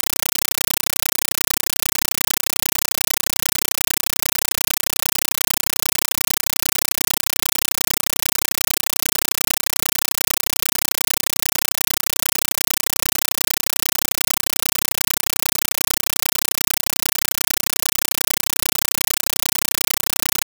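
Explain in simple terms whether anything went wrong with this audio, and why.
Something went wrong for the whole clip. This is a compressed stream played as audio: coded data was treated as ordinary sound and never decoded. It comes out as loud, chattering static, with 8 ms noise bursts about 31 times a second, which fits a Dolby Digital stream.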